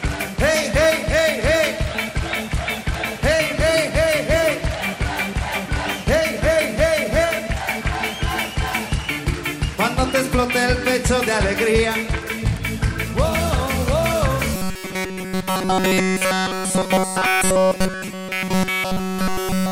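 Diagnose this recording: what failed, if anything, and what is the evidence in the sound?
Robotic sound from repeated short buffers, 14.55 s to end: a rigid 188 Hz buzz throughout, likely a buffer underrun looping 5.3 ms blocks, not silent dropout gaps.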